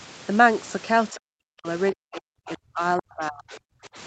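From 1.12 to 1.67 s, 1.92 to 2.81 s and 2.97 to 3.97 s the speech dips by as much as roughly 40 dB and breaks into pieces, likely speech suppressed in double talk: the echo canceller mistook it for echo. Unlike packet loss, the gaps are smooth gain dips without codec glitches.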